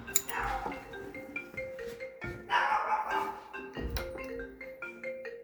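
Nothing stood out as a technical fault on listening to this everyday sound recording.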